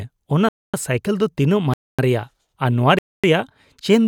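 Hard-edged holes of 250 ms cut into the speech at 0.49–0.74, 1.74–1.99 and 2.99–3.24 s: a gap between chunks, with silence inserted between 1.0 s blocks.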